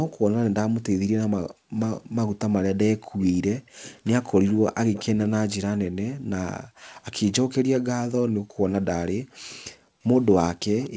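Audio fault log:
0.09–0.17 s, 3.02–5.04 s, 6.95–7.00 s and 9.49–10.90 s, echo leak: a delayed copy of the speech trails the original by 244 ms. It sits about 25 dB below the speech in the first and last stretches, about 15 dB below in the long middle stretch where it is most audible, and about 40 dB below in the brief 6.95 s scrap. The likely cause is a far-end loudspeaker whose echo canceller let some of the returned sound through. On a spectrogram, weaker replicas of the harmonic bands appear shifted 0.24 s to the right.
1.45–3.75 s and 5.87–10.02 s, background gated by the echo canceller: the room tone ducks by up to about 40 dB, then returns. The first span loses roughly 0.7 s of background in total and the second roughly a second. This happens because the canceller suppresses the microphone hard while it judges the loudspeaker to be active. The waveform's noise floor flattens to near silence in short blocks, and the spectrogram shows matching vertical gaps in the low-level background haze.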